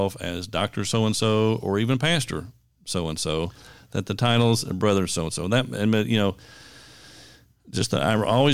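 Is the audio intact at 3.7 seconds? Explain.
Yes, the speech at 3.7 seconds is intact, with no audible fault at that moment.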